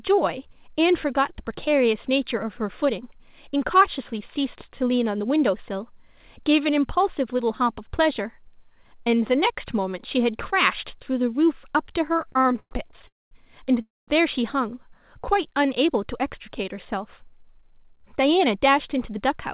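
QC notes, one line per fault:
12.16–13.05 s, repeated stalls (stutter): audio halts and drags in 15 short gaps up to 114 ms, about a third of the span, as the jitter buffer kept running empty and stretching the last sound.
13.07–13.33 s and 13.81–14.10 s, call audio freeze: a brief buzzy or hissy tail fades to silence for about 0.21 s each time, then resumes unbroken, likely delayed packets emptying the jitter buffer and inserting 0.24 s and 0.26 s gaps.
16.28–19.38 s, jitter buffer speed-up: delivery sounds hurried, running 6% fast at unchanged pitch, as the receiver trimmed pitch-period slices, roughly 0.2 s in total, to drain excess buffered delay.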